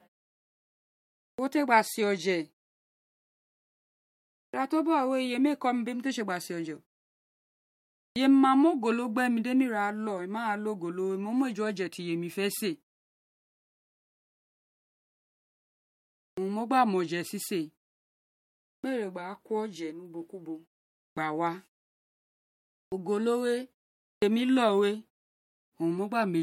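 Speech, with a clipped start after a pause at 1.34, 4.49, 8.11, 16.33, 18.79, 21.12, 22.87 and 24.17 s. Each time, the first 44 to 53 ms of sound is missing. Words jump in abruptly, without their opening sounds. The output device goes idle during silence and needs a moment to wake before it passes audio again. It happens even after gaps as short as half a second.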